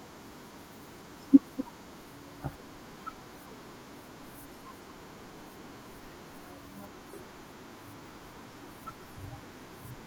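At 3.35 to 3.38 s a short glitch occurs in the speech, and at 7.09 to 7.18 s a longer one follows. Both are a corrupt frame decoded: damaged bits in the compressed stream were played anyway, so misread gains and codes put energy at frequencies where none belongs. The first lasts about one codec frame, the second what sounds like a run of about four, each peaking around -35 dBFS. Unlike a dropout or concealed packet loss, the sound isn't smeared but replaced by energy at the wrong frequencies.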